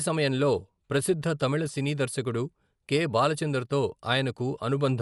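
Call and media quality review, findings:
Speech dull and band-limited throughout, nothing above 11.5 kHz; plainly audible rough, fluttering noise around tonal parts. Likely Dolby Digital compression, bitrate consistent with 64 kbps: encoder narrows band, leaves many frequency lines without mantissa bits, decoder fills them with dither noise.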